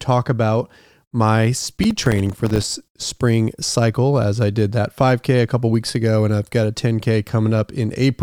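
A speech clip hit by processor overload crackle from 1.83 to 2.64 s. The processor kept missing its deadlines for short buffers of around 3 ms, dozens of times over that stretch, and each miss left a hard-edged gap of silence. Together these make a gritty crackle over the speech that ends when the load eases.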